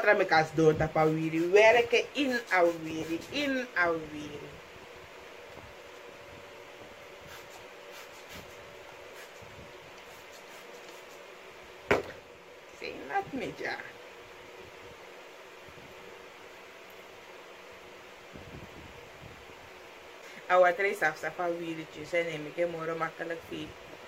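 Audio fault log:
No faults heard anywhere in this audio.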